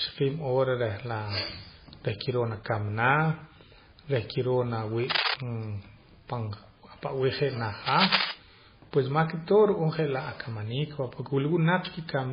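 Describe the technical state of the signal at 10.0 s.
At 10.0 s you're hearing heavy damage that runs through the whole clip, likely MP3 compression at a very low bitrate, something like 16 kbps. The encoder has run out of bits, so it drops the weaker frequency lines and they blink in and out from frame to frame. That gives the speech a watery, swirly character, with metallic chirps on s sounds and smeared attacks. There's nothing above 5.1 kHz, so the top end is gone.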